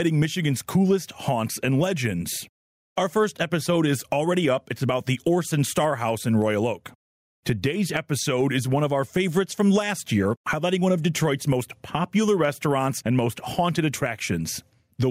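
Throughout the clip the speech shows gain pumping, with the level swinging by roughly 10 dB. The likely cause is input gain set far too high, with a fast limiter clamping down on each loud sound. The result is squashed and breathing.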